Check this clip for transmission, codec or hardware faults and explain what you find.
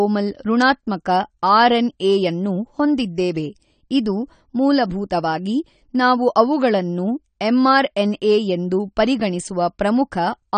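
The speech sounds dull and smeared throughout, with nothing above 9 kHz and a fizzy, warbling edge on sibilants. This is likely AAC compression, consistent with AAC-LC at about 32 kbps: the encoder discards the upper bands and coarsely quantises what remains, leaving plainly audible damage.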